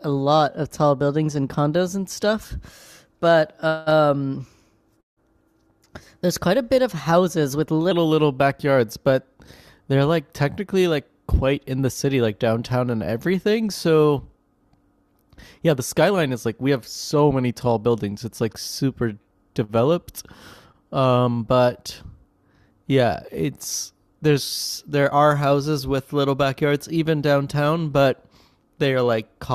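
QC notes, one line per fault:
0.00 to 7.91 s, section at the wrong speed: the opening stretch of speech runs about 1.12 times too fast, so it comes out hurried and pitched up by roughly two semitones, a bit chipmunky before it snaps back to normal. Pitch and tempo shift together, which is the giveaway of plain resampling rather than a time-stretch. The likely culprit is that this part got played or conformed against the wrong clock rate.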